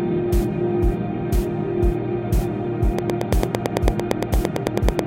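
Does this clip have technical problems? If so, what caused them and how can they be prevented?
Yes. A train of clicks runs from 2.99 s to 5.00 s: about twenty near-identical pulses at a steady 8.97 per second, peaking around 20 dB above the sound, likely from electrical interference or a faulty connection or power supply. Shielding cables, moving away from noisy equipment and using a stable audio interface would prevent it.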